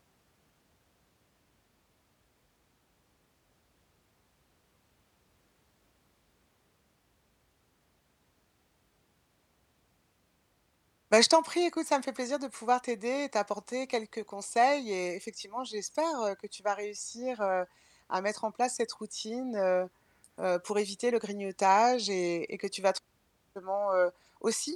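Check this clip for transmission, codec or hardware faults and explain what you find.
No faults can be heard anywhere in this speech.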